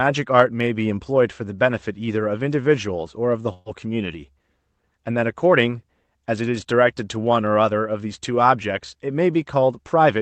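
Speech clip with one burst of packet loss from 3.53 to 3.68 s. About 120 ms of audio never arrived. The receiver filled the gap by stretching the last sound and fading it, heard as a held buzz or hiss. Speech then resumes further on, that stretch gone. The call path's codec limits the audio to a band up to 8 kHz.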